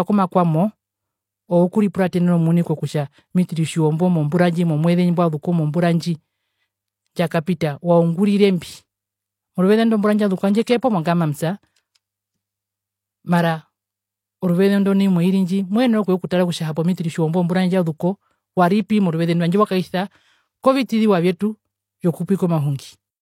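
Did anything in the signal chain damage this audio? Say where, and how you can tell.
Yes, codec pre-echo: block-spread quantisation noise leaks ahead of attacks at 7.45, 10.64–10.67, 16.75, 18.88 and 21.38–21.40 s, showing as broadband smears before each spectrogram onset.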